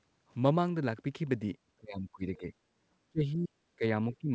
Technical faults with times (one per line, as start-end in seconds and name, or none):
1.77-2.52 speech suppressed in double talk
3.09-4.31 speech suppressed in double talk